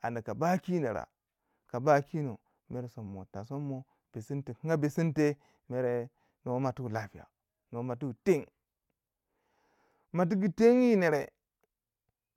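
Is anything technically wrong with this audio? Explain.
No, nothing is technically wrong.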